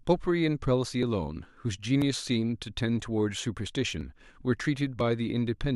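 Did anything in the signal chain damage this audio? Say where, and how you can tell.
Yes: periodic USB or driver dropouts at the driver stage. Ticks recur every 1.0 s from 1.03 to 5.01 s, each skipping a few milliseconds of speech; their strict regularity rules out random packet loss.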